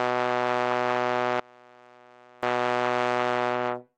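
From 1.4 s to about 2.43 s the music suddenly drops by about 28 dB, leaving only a faint trace before it returns at full level. That's likely one channel inverted, where a polarity flip makes the shared content of both channels cancel when they're combined.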